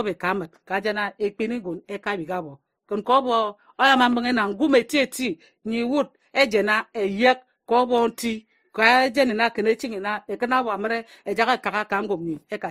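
Speech with a hard ceiling at 15.9 kHz throughout, carrying two layers of compression damage heard together. This is likely transcoding between lossy codecs, consistent with an MP3 near 49 kbit/s re-encoded to Opus near 32 kbit/s.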